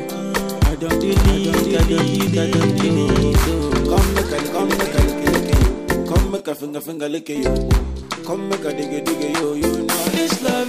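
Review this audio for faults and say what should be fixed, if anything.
A doubled audio track runs from 1.10 s to 6.40 s: a second full-band copy of the sound trails the original by roughly 0.7 s at about the same level, with no decay or room colouring, and it starts and stops abruptly at those points. This is likely a second capture through a slower path being mixed back in. On a spectrogram, every feature appears twice, shifted sideways; the waveform shows repeated shapes offset by that gap. Route each source through only one capture path and check edits for overlapping duplicate regions.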